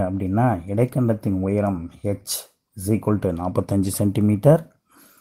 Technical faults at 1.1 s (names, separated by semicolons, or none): none